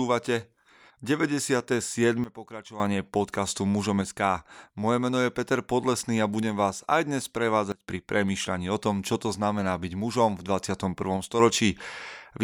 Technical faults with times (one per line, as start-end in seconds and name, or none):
2.24-2.80 sudden gain jump
7.72-7.88 sudden gain jump
11.40-12.44 sudden gain jump